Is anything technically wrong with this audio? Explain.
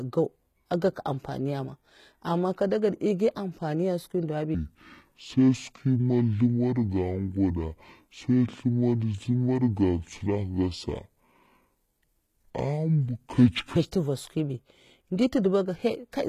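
Yes, there are two faults.

Throughout the clip the speech carries plainly audible codec damage, likely from HE-AAC compression at a low bitrate around 20 kbps. The treble is rebuilt by copying lower bands upward, so s sounds come out gritty and metallic. A spectrogram shows repeated, blocky patches up to the 20.4 kHz cutoff.

From 4.54 s to 13.76 s there is a section at the wrong speed, likely playback against the wrong clock. It runs at 0.61 times normal speed, so the speech sounds deep and slow, roughly ten semitones lower. A spectrogram shows harmonics squeezed closer together, and the waveform looks stretched in time.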